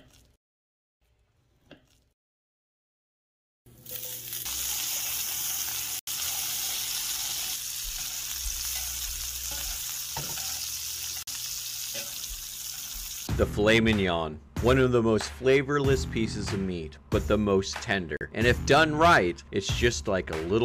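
Bluetooth stalls at 5.99 to 6.09 s, 11.23 to 11.29 s and 18.17 to 18.23 s: the sound drops to silence for about 80, 45 and 40 ms, then resumes. Likely interference delayed packets, starving the headphones' buffer until retransmissions arrived.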